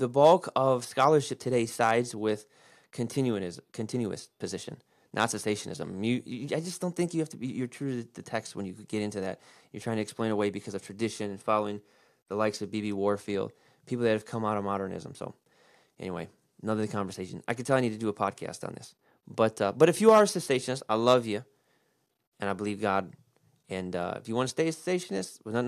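Listening to this speech recording, nothing technical stood out as a problem at any point.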